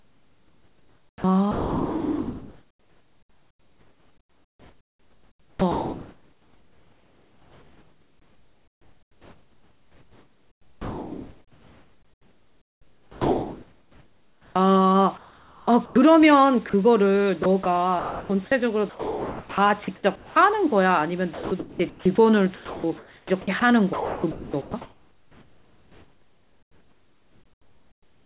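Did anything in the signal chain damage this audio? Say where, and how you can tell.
Yes. Sound chopped by the voice detector, at the call-processing stage, across 0.00–14.56, 15.18–15.96, 17.44–18.30 and 21.34–28.22 s. Speech flickers against synthetic comfort noise repeatedly, likely from the sender's detector toggling, unlike a single clean dropout.

Sound dropped by the voice detector, also call processing, at 16.70–16.74, 18.90–19.58 and 20.16–20.36 s. Each is one stretch where speech gives way to steady comfort noise, likely because quiet speech was judged background.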